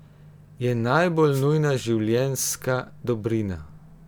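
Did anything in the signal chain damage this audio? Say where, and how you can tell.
Yes. A brief burst of static, a swish, is heard from 1.30 to 1.46 s, just before "nujna življenjska". This is a wireless microphone noise hit: the analogue FM radio link faded as reflections cancelled, and the receiver's noise briefly took over.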